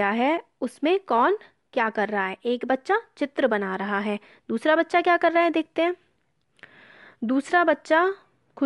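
Nothing goes wrong anywhere in this bit of speech, so there's no technical fault to point to.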